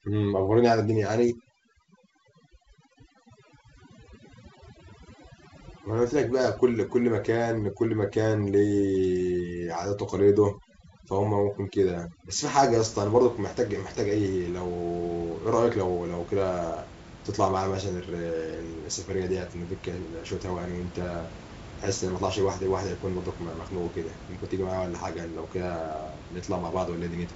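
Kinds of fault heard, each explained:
Overdone noise removal: a noise reducer pushed too hard is gating individual frequency bands down whenever they sit near its noise estimate, so from the start to about 12.8 s the background drops and breaks up into twinkly specks, and the quieter parts of the speech get stripped out too.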